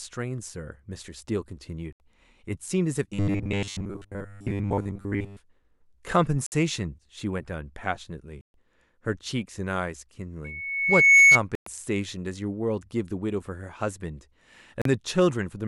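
Speech with five short silent gaps, at 1.93 to 2.00 s, 6.46 to 6.52 s, 8.41 to 8.54 s, 11.55 to 11.67 s and 14.82 to 14.86 s, each lasting roughly 40 to 130 ms before the sound picks up further on: Bluetooth dropouts, likely from packets reaching the headphones too late and being discarded. From 3.14 to 5.39 s the voice becomes a rigid metallic buzz at 100 Hz, robotic sound from repeated short buffers, likely from a 10 ms chunk being replayed while most of the real audio is skipped. At 10.44 to 11.40 s a steady 2.2 kHz tone swells over about 0.7 s to roughly 15 dB above the speech, a loudspeaker feedback squeal caused by the microphone picking up its own loudspeaker.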